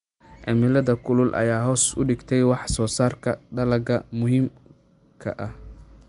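From start to finish the speech carries plainly audible coding damage that points to likely Nellymoser compression, the old Flash microphone codec. Each short block gets a fixed, small bit budget, so weaker frequency bands receive nothing and are replaced with noise, giving a rough, hissy halo around the speech and a smeared, underwater character. Nothing remains above 10.6 kHz, and the degree of damage fits a rate of around 44 kbps.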